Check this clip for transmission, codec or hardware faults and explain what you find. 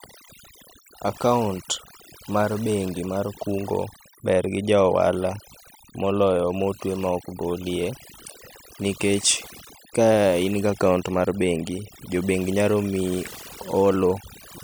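One fault runs through the whole speech clip, and it comes from processing rather than transmission or hardware. Overdone noise removal persists from start to finish: a denoiser set too aggressively gates off individual frequency bands sitting near its noise estimate, taking quiet speech detail with them. Pauses drop to near silence sprinkled with twinkling specks. Unlike low-bitrate codec swirl, the damage tracks the noise floor and is worst in quiet passages.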